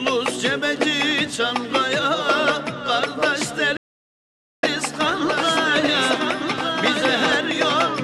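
At 3.77 s the sound cuts out and stays silent until 4.63 s, a gap of about 0.86 s, before resuming. This playback stall was likely caused by the player running short of data or being blocked, and on a waveform it appears as a flat, empty stretch.

From 5.15 s to the end, a second copy of the sound follows roughly a second behind, a few decibels quieter, with no reverberant tail. This doubled audio track likely comes from the signal being mixed in twice. A spectrogram shows every full-band pattern repeated at that fixed offset, with the copy starting abruptly.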